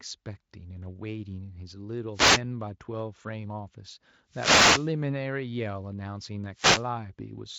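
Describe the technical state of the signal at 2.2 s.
A short swish of static rises over the speech from 2.13 to 2.41 s, a wireless microphone noise hit. The analogue FM radio link fades as reflected signals cancel, so receiver noise climbs before the carrier recovers.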